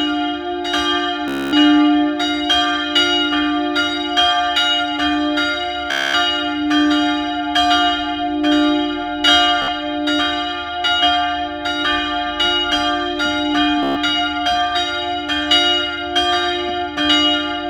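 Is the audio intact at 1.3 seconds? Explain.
No. A Bluetooth stutter runs from 1.28 to 1.53 s: lost packets make the receiver replay a short slice repeatedly, a machine-gun buzz, before audio resumes further on.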